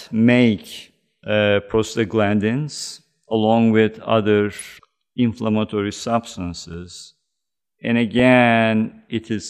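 At 4.59 to 4.65 s, just after "along with other", weak DAB reception lets residual bit errors, well under one percent, slip past error correction into the MP2 data. Corrupted samples and scale factors throw individual sub-bands out of level, producing DAB burbling, a brief burst of burbling over the speech that fits about four damaged frames. At 6.74 s the output buffer was likely not filled in time, leaving a block of digital silence 1.33 ms long, consistent with a 64-sample block. The abrupt cut to silence and back is heard as a tick or dip. At 8.19 s the same reception errors return as a shorter burst of burbling that points to about two corrupted frames.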